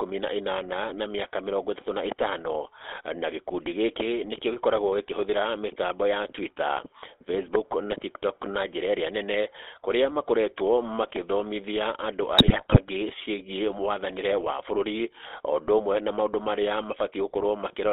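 From start to finish you've got the GSM full-rate codec: a buzzy, gravelly edge and a band squeezed to 300 Hz to 3.6 kHz, which fits a 13 kbps full-rate stream. Then from 12.38 to 12.79 s GSM bit errors kick in. Corrupted filter, pitch and gain values turn the voice into squawks and gargling pops, consistent with roughly twenty damaged frames.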